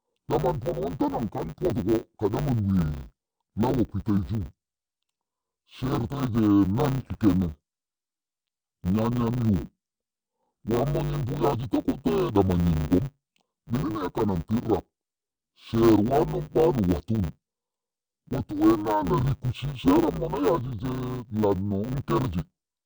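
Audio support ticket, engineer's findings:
Interleaved audio read as planar, whole clip. Speech dull, robotic, steady buzz at 100 Hz, no clear octave drop. Probable component: format conversion or deinterleave stage. Mechanism: 10 ms blocks of alternating L/R samples split into first and second halves, both played at half speed; pace preserved, but the block edges chop the sound at 100 Hz.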